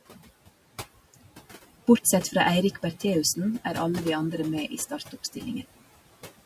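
From the start, there is overdone noise removal: the suppressor is set so hard that the background drops and breaks up into twinkling specks. The noise suppressor artifacts run the whole way too. It pulls what it judges steady noise down by about 17 dB frame by frame, so the room noise, which sits about 19 dB under the speech, sinks between words and creeps back up beneath them. Between 4.89 and 5.15 s there's speech cut by the noise suppressor. It mistakes bits of the voice for noise and ducks them by up to about 12 dB, roughly a tenth of a second in total, so those sounds come across swallowed and faint.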